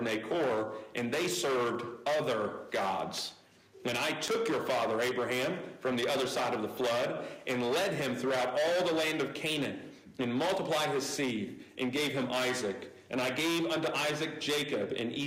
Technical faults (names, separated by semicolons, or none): hard clipping; gain pumping; word clock ticks